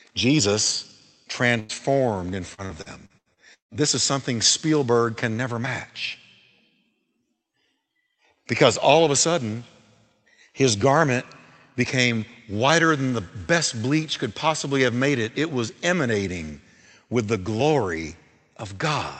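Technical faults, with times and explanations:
1.59–1.75 s, burst of packet loss: A short run of packets went missing, and the receiver covered the hole by stretching out the last bit of speech for about 96 ms while fading it down, so you get a brief held buzz or hiss that dies away. Then it picks up again with about 80 ms of the speech simply gone, which makes the jump sound like a small skip.
1.69–1.73 s, lost packet rebuilt from error correction: Inside that same rough patch, one 40 ms packet wasn't lost for good. The following packet carried a low-bitrate backup copy (Opus in-band FEC), and the decoder played that instead, so there's no extra hole, just a grainier, noisier moment. Since this call's audio already tops out around 8 kHz, there's no obvious loss of extra treble on top of that.
2.30–4.02 s, repeated packet loss (robotic sound): Over this stretch the packets kept dropping out, with seven separate holes. 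Each one got patched by extending the previous sound, about 425 ms of fill in total, and about 440 ms of actual speech is missing, with the longest hole at 158 ms. Roughly a quarter of the span is made-up audio, with some of it rebuilt from backup copies, which is why it comes out choppy, like a robot.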